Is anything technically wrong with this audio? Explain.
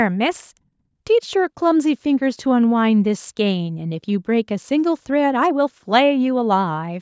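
No, this is speech that has been through a call's microphone processing, which rolls off the lowest bass and leaves nothing above 8 kHz as expected for that path, and none of that is a fault.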